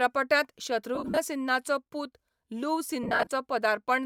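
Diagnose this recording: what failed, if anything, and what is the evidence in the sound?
Around 0.95 to 1.18 s and again from 3.03 to 3.31 s, the speech breaks into a noisy, smeared texture in short bursts, sagging toward quiet where a gap runs longest, roughly 50 ms. The stage is the Bluetooth link: these are lost LE Audio frames. About 165 ms and 170 ms went missing within those windows. The LC3 decoder filled each hole by repeating the last spectrum with random signs, fading it as the run lengthened.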